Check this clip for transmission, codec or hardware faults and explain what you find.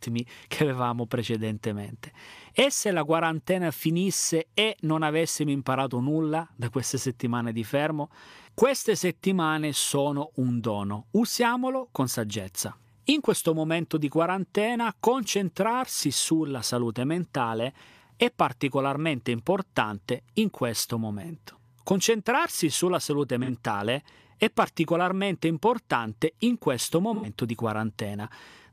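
There are two brief dropouts in the speech, both AAC frame loss with concealment. The first runs from 23.43 to 23.50 s, right after "sulla salute", and its roughly 43 ms length fits a single lost frame. The second runs from 27.14 to 27.28 s, after "particolarmente importante in questo", and its roughly 85 ms length fits two lost frames. Each time the decoder patched the gap by reusing the last good spectrum, so you hear a short smeared, noisy or phasey blip.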